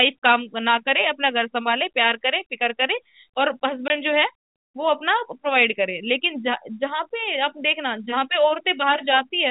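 It's a speech clip, and the problem is packet loss filled with silence: at 3.88 to 3.9 s a 20 ms hole drops straight out of the audio, which fits one lost packet on a 20 ms frame size. The receiver had nothing to play for that slot and just inserted silence, so the edges are abrupt. Underneath, the G.711 telephone coding keeps everything below 4 kHz, giving that narrowband phone sound.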